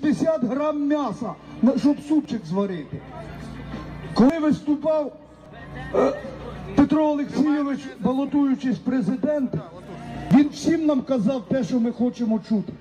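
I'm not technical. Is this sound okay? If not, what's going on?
No. The recording software likely fell behind and lost tiny pieces of audio, a fault called a dropped buffer (overrun). At 2.25, 4.30, 5.46, 8.29 and 10.31 seconds you hear the sound jump ahead. The jumps at 4.30 and 10.31 are longer.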